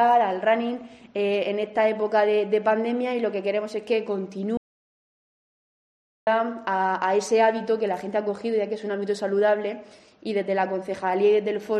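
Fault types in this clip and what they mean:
Audio dropout to silence: from 4.57 s to 6.27 s the sound cuts off abruptly and the track holds silence for about 1.7 s, with no room tone or background underneath, before the audio returns mid-flow. That dead, empty gap is what a recorder or encoder produces when it keeps writing silence after its input has vanished, most likely through a momentary disconnection, failed link or accidental mute, so whatever happened in that stretch is lost.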